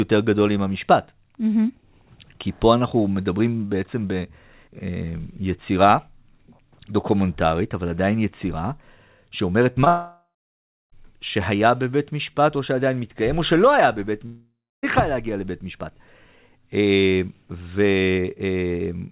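At 9.72 to 9.78 s and again at 9.84 to 9.88 s there is short concealed packet loss. About 40 ms and then 20 ms of audio failed to arrive in time, and the receiver bridged each gap by extending the preceding sound, which is heard as a brief smear or wobble.

From 9.88 to 10.94 s, the sound becomes a fading, buzz-like continuation, followed by about 0.65 s of silence. Speech then resumes with a section missing, likely a long network dropout. The same pattern occurs at 14.26 to 14.85 s, with about 0.29 s of silence. Throughout the clip nothing is present above 4 kHz, which fits a G.711 narrowband call path.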